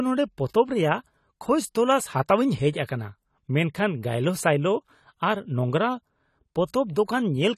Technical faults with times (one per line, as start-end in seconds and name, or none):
0.00-7.58 AAC compression